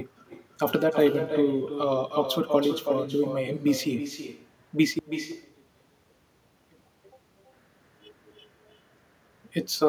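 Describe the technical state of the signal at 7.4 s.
At 7.4 s the signal is close to the end of a stretch from 4.99 to 7.53 s where the level collapses by about 34 dB and the centred speech almost disappears, leaving only a faint residue. The likely cause is one channel inverted: one stereo channel has its polarity reversed, so when the pair is summed to mono everything the channels share cancels. A simple dropout or mute would give silence; what remains here is the difference between the channels, a faint trace rather than nothing.

Running underneath, as it does throughout the clip, is echo with no canceller. The far end's loudspeaker output is picked up by its microphone and sent straight back, so each phrase is followed roughly a third of a second later by a quieter copy, about 9 dB below the speech. Room reverberation would be a smooth decaying tail. This is a distinct, delayed repeat, thinner than the original, that stands apart from the sound it shadows.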